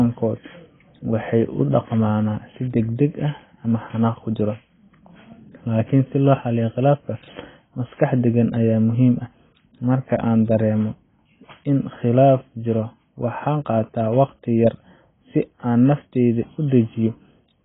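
AAC compression damage runs through the whole recording. Nothing is left above about 3.7 kHz, so the speech sounds dull and boxed-in, and what remains is smeared, with a warbling, fizzy texture on held vowels and sibilants. The likely cause is AAC-LC coding at a very low bitrate, around 16 kbps judging by how heavy the damage is. With so few bits, the encoder drops the upper band and quantises the rest coarsely against its hearing model.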